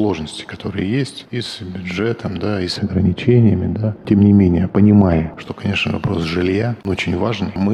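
From 2.76 to 5.48 s there's de-emphasis applied wrongly: a treble cut meant to undo pre-emphasis landed on audio that didn't need it. The top end rolls off smoothly, down about 11 dB at 10 kHz against 1 kHz, so that stretch sounds dull and muffled.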